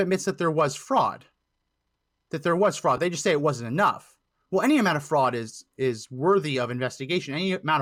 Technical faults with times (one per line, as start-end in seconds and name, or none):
2.97 lost LE Audio frames